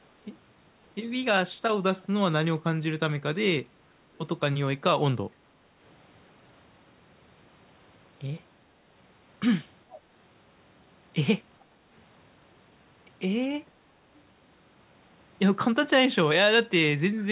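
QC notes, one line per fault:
9.9–9.99 s, echo leak: far-end echo cancellation likely missed some loudspeaker pickup, so a faint scrap of speech returns 424 ms late, about 25 dB down.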